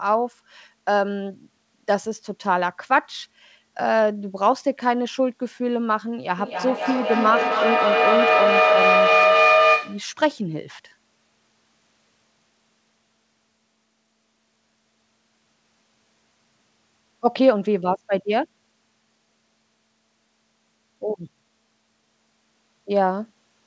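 Speech carried over a call link whose content stops at 8 kHz has a feedback howl from 6.38 to 10.19 s. A microphone-speaker loop builds to about 3 dB above the speech near 700 Hz, the loop repeating roughly every 300 ms. On a spectrogram this shows as a bright horizontal band.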